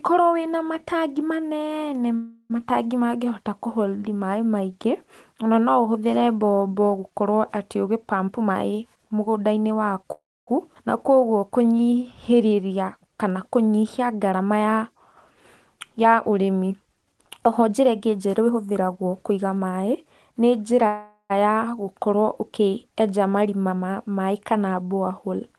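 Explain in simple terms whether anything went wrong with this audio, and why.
Several things went wrong, all typical of audio sent over a live call connection.

Call audio freeze at 2.15 to 2.52 s, 10.12 to 10.49 s and 20.87 to 21.32 s: the sound stalls for roughly a third to almost half a second. The first fills the wait with a fading buzz or hiss. The second goes nearly silent for about 0.27 s, and the third ends in a short silence. The likely cause is delayed data leaving the playback buffer empty. Unlike a skip, speech resumes exactly where it stopped, so nothing is lost.

Jitter buffer speed-up from 8.27 to 10.04 s and from 14.13 to 20.33 s: the receiver trimmed tiny slices to reduce delay. The first stretch runs about 14% fast, losing roughly 0.3 s. The longer second one runs about 7% fast, losing about 0.4 s. Pitch stays normal, so it sounds hurried rather than squeaky.

Skip ahead at 10.75 to 10.77 s: about 0.2 s of speech simply vanishes, and the two sides are joined almost directly with no pause. 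This is the opposite of a freeze, which inserts a gap and keeps everything.

Jitter buffer slow-down from 11.10 to 12.74 s: tiny pieces are repeated to rebuild the buffer's reserve. This adds about 0.2 s and makes speech about 12% slower at the same pitch. Sounds are drawn out, unlike a freeze's single sudden stall.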